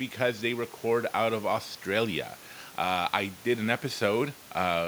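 Nothing's wrong here; it's a speech recording with some background sound from the room sitting about 25 dB beneath the talking, and that's just part of where it was recorded, not a system problem.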